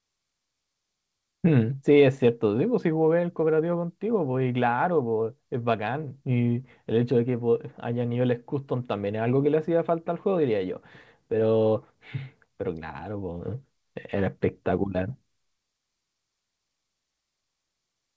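Nothing goes wrong anywhere in this speech; it simply came over a call connection that was working as it should, and there's nothing above 8 kHz, which fits a wideband codec such as G.722.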